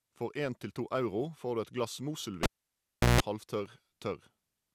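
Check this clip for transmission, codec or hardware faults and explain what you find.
Two hardware faults show up in this speech clip, one after the other near the end.

The first is a cable pulled and plugged in, from 2.43 to 3.21 s. A live lead comes out, and a pop marks the break. The sound then drops to near silence for about 0.73 s. As the plug goes back in, only the tip touches at first. That picks up 60 Hz mains buzz for about 0.16 s. A second pop follows as the full signal returns.

The second is processor overload crackle, from 3.66 to 3.88 s. The processor falls behind and misses a handful of buffer deadlines over that short stretch. Each missed buffer is filled with silence. The gaps are tiny, which fits buffers of under a millisecond. Their hard edges click against the speech. Together they form a short, gritty tearing that stops once the load eases.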